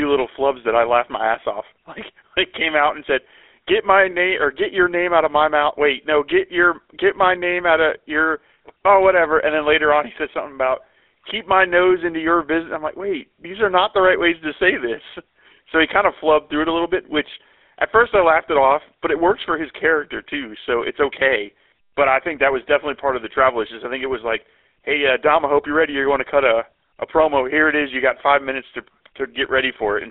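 Throughout, the speech has passed through the GSM full-rate codec, consistent with its 13 kbps coder. It rebuilds the voice from a vocal-tract model driven by sparse, regularly spaced pulses, giving a plainly audible buzzy, gravelly roughness, with nothing above 3.8 kHz and a 300 Hz to 3.6 kHz phone-line band.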